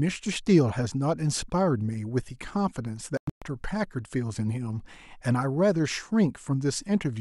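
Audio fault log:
3.17–3.42 s, Bluetooth dropout, likely: the speech cuts out in a few holes that add up to about 224 ms of silence across roughly a quarter-second, the longest single gap about 122 ms. The pattern fits a burst of around a dozen wireless packets missing their deadline and being dropped, with the output going quiet until good ones arrived. When the sound returns it has moved on in time, as though it kept playing through the gaps.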